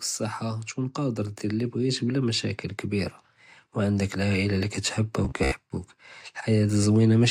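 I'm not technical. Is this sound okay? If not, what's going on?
No. From 0.4 to 2.5 s there's automatic gain rising: the recording system decided the input was too quiet and slowly turned itself up. The voice and the background noise swell together, which tells it apart from someone simply moving closer, where only the voice would grow.

From 5.25 to 5.55 s there's a robotic sound from repeated short buffers. The voice becomes a stiff, metallic buzz, about 67 times a second, that loosely follows the speech. It's likely caused by audio arriving late, with the software looping tiny slices of about 15 ms to fill the gaps, so roughly half of that stretch is repeats. Unlike a plain stutter, the buzz keeps one fixed rate.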